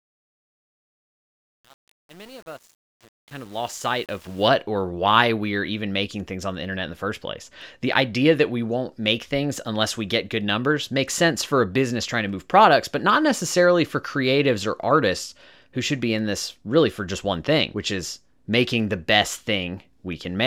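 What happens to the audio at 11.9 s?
At 11.9 s the speech carries on intact, with no dropout, click, level jump or other fault.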